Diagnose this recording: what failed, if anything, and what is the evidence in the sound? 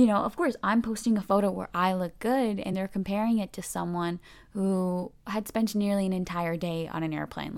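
Damaged data in the compressed stream, at 5.02 s, just before "had spent nearly an". It is a codec-stage fault: corrupted frame bytes make the decoder misread them and lose sync, giving a brief blip as it hunts for the next valid frame header.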